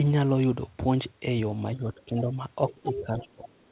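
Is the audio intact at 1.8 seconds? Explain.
No. From 1.75 to 2.36 s the speech is pulled down by up to about 15 dB and is affected for about half a second in total. This is speech suppressed in double talk, likely an echo canceller attenuating the near talker while the far side spoke.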